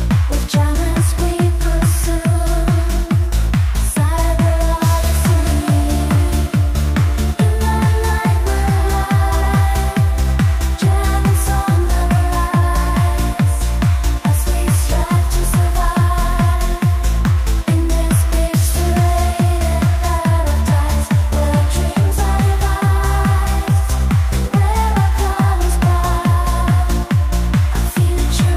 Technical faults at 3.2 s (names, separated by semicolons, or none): none